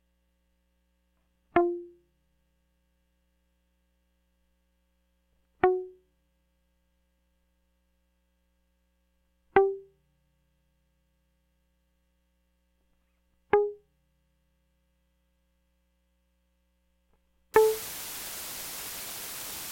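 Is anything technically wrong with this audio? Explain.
Yes. From 17.54 s to the end at 19.71 s, the music drops to low bit depth with dither, around 6 bits. Dither randomises the rounding error, so it spreads out as a steady, even hiss instead of distortion. It's loud too, sitting not far below the music.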